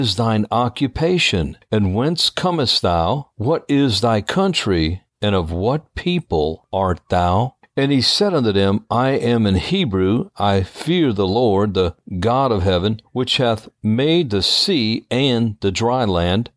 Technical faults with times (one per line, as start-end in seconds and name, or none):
none